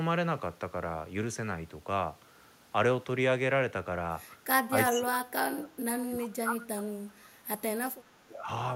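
At 4.70 to 4.76 s the speech level dips slightly, by about 5 dB, for a moment. From 4.93 s to 6.99 s it sinks much further, by about 25 dB at its deepest, across roughly two seconds, and at 8.23 to 8.48 s it drops again by about 20 dB. This is likely speech suppressed in double talk: with both sides talking at once, the echo canceller could not tell this talker from the loudspeaker echo and turned the outgoing signal down.

Between 4.87 and 5.02 s a second copy of the speech appears, trailing the original by 386 ms and sitting about 10 dB below it. This is likely an echo leak: on the side playing the call on a loudspeaker, the echo canceller failed to remove all of the returning sound, so a delayed scrap of it was sent back into the call.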